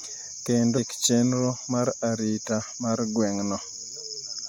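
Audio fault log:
0.77–0.79 s, damaged data in a compressed stream: a short glitch cuts into the speech here. A bit of the compressed data got mangled, so the decoder misread those frames, lost its footing and had to hunt for the next clean frame before picking back up.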